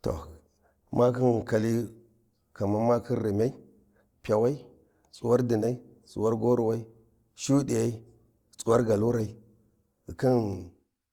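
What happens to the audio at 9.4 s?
At 9.4 s you're inside a stretch, from 8.17 to 10.17 s, where the adaptive stream dropped to a lower bitrate. The connection slowed, so the player swapped versions mid-speech without a gap. The sound turns abruptly grainier, which fits a drop from Opus 64 to 24 kbit/s.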